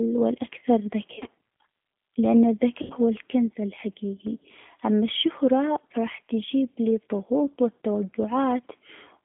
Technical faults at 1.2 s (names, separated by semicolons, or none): G.729 codec; VoIP packet loss concealed by the speech codec